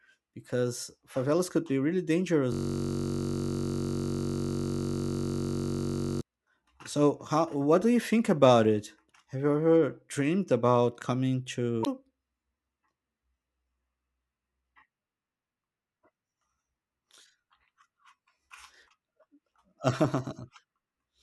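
A speech recording with two faults. From 2.52 to 6.21 s a system hang loop repeats one 21.33 ms slice, about a 1024-sample buffer, as a steady 46.9 Hz buzz rather than a skipping stutter. At 11.82 to 11.87 s, just after "ever dreamed about coming", damaged data in a compressed stream produces a brief glitch as the decoder resyncs.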